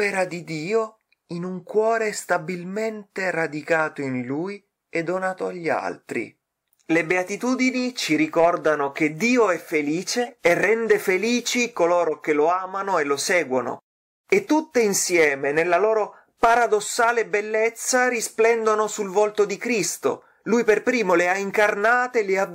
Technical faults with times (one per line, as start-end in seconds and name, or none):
10.22-10.30 corrupt frame decoded
12.06-12.12 corrupt frame decoded